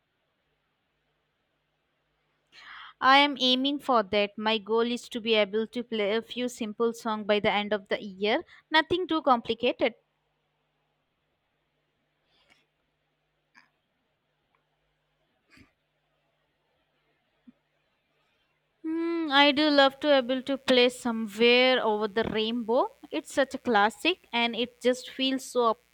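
At 19.52 s a mains buzz comes in under the speech and continues to the end of the clip. It is a steady, raspy buzz sitting roughly 40 dB below the speech. The interference is tied to a 60 Hz supply: sharp switching spikes leak into the signal path twice per mains cycle, so the pulses repeat at 120 Hz. Their harmonics extend well into the several-kHz range, which gives the buzz its edge.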